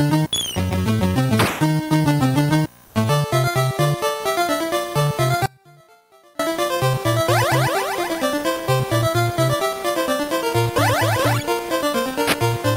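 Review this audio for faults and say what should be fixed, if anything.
Between 2.85 and 2.95 s there's comfort noise in place of the background. For about 100 ms the real room tone, sitting roughly 30 dB under the loud parts, is swapped for a flat, featureless hiss about 2 dB quieter. That's likely discontinuous transmission, probably Opus DTX. Switching DTX off on the sending side would fix it.

From 5.46 to 6.39 s there's an audio dropout to a faint residue. The sound cuts out abruptly for about 0.93 s, leaving only a faint trace roughly 30 dB below normal, likely from the signal being lost upstream while the path after the break stayed live. Securing the source connection and checking for buffer or network interruptions should prevent it.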